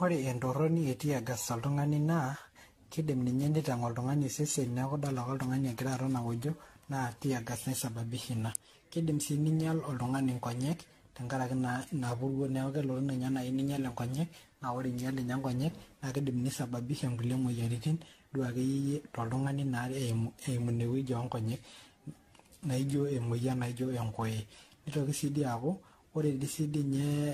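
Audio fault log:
Throughout, generation loss: the speech is swirly, hollow and smeared, with blurred attacks. Likely repeated re-encoding, about fifteen passes, fitting AAC near 64 kbit/s.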